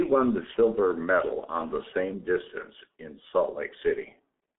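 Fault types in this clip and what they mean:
G.723.1 codec: The speech was carried through the G.723.1 low-rate telephony codec, and the heavy coding damage fits its 6.3 kbit/s mode. That mode works in 30 ms frames and refreshes its model of the voice only slowly. The channel passes roughly 200 Hz to 3.6 kHz, with nothing above 3.8 kHz, so the speech sounds muffled and hoarse throughout, and consonants blur and smear into their neighbours.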